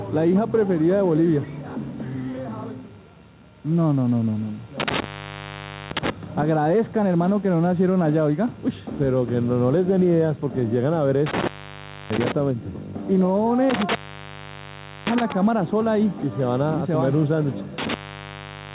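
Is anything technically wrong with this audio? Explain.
Yes, there are two problems. Throughout there's gain pumping. The level ducks by around 5 dB under each loud sound, so loud and soft parts sit closer in level and the sound is squashed. That's likely the input gain set far too hot, with a fast limiter clamping down on every peak.

Then there's an intermittent contact, four times: 4.80 to 6.10 s, 11.26 to 12.32 s, 13.70 to 15.32 s, and 17.78 s to the end. Each time the sound cuts out with crackle at the edges, leaving faint hiss for roughly 0.87, 0.63, 1.12 and 0.95 s. That's a loose cable or plug briefly losing the connection. The dull top, with nothing above 4 kHz, is just the call codec's narrow band, which fits G.711.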